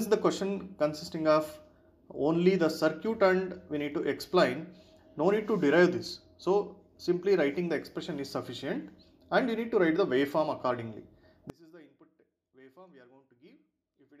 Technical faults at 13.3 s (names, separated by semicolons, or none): one channel inverted